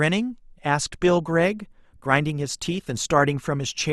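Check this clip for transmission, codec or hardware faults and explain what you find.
There's one fault here: an adaptive stream at a lower bitrate. From 0.99 s to the end, the stream drops to a cheaper version, which fits Opus falling from 64 to 32 kbit/s. Codec artefacts rise, and the switch is abrupt but gapless.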